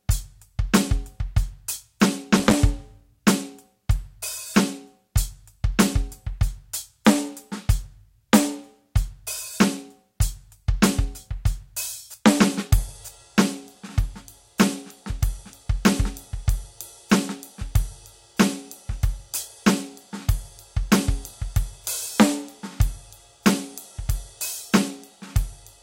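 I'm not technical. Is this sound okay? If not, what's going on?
No. At about 2.35 seconds the music is hit by a short burst of rough crackling and scratching that lasts until about 2.54 seconds. That's loose connector crackle: a plug or socket with a worn or dirty contact was briefly moved, so the signal flickered on and off. Unlike the steady, even crackle of an old record, this is one ragged burst that comes and goes with the movement of the connection.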